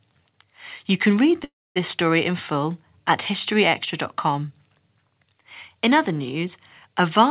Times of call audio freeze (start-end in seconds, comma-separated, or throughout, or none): 1.44-1.78